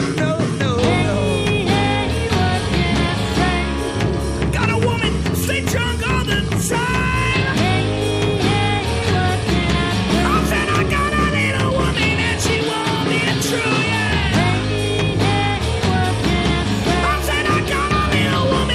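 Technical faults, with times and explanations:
No technical faults are audible at any point.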